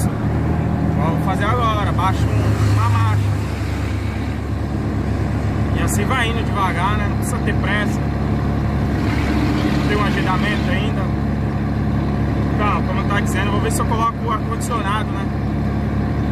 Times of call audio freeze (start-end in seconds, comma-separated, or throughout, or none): none